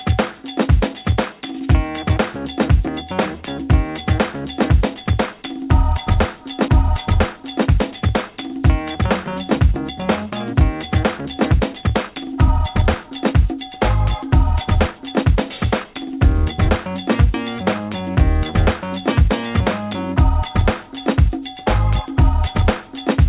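At 6.68 to 6.70 s, a skip ahead. About a second of audio was dropped. Playback jumps straight forward with no gap filling the join.

Jitter buffer speed-up follows at 7.37 to 9.03 s, 10.05 to 10.81 s, 11.20 to 13.75 s and 14.24 to 17.81 s. The receiver trimmed pitch periods to shed backed-up delay. The audio runs 4 to 9 percent fast at unchanged pitch and sounds hurried in the first three stretches. Nothing above 4 kHz is present, which fits a narrowband call codec such as G.711.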